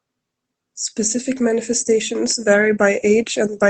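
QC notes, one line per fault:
2.08–3.70 s, automatic gain rising: from about 2.1 s to the end, the speech and the room noise behind it swell up together, gradually rather than in a jump. That's the AGC deciding the input was too quiet and raising its gain over the last second and a half or so. Because it's lifting everything it hears, the background comes up right alongside the voice, all heard through the call codec's usual coding noise with the top end stopping around 8 kHz.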